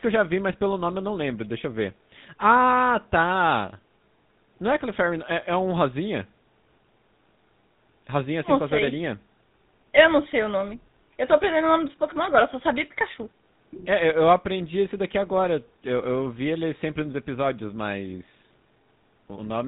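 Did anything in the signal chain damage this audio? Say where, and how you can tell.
Yes. The damage happened at the codec stage: the speech went through the GSM full-rate codec, and its sound fits that codec's 13 kbps rate. The codec reduces the voice to a vocal-tract filter driven by a coarse train of regularly spaced pulses, and it discards everything above 4 kHz. The result is plainly audible for the whole clip: a dull, band-limited top end and a buzzy, gravelly roughness that never lets up.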